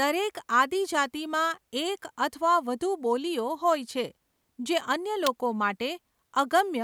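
At 5.27 s an electrical switching spike cuts in, a sharp snap peaking near -10 dBFS, likely a nearby switch arcing; it appears as a thin full-band vertical stripe.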